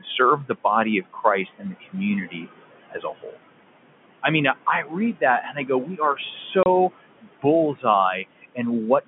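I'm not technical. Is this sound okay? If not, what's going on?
No. Three kinds of fault stand out.

Noise suppressor artifacts run through the whole clip: a filter strips out background hiss, with the room noise dipping between phrases.

Speech cut by the noise suppressor happens when the filter mistakes quiet parts of speech for noise and turns them down. Those parts sound swallowed or faint at 1.45 to 1.95 s (right after "serve the body of"), 2.26 to 2.46 s, 2.90 to 3.37 s, 4.83 to 4.95 s (after "I mean I"), 5.42 to 6.19 s, and 7.21 to 7.45 s.

Packet loss filled with silence occurs once, at 6.63 s. One chunk of audio went missing in transit, leaving a 30 ms hole.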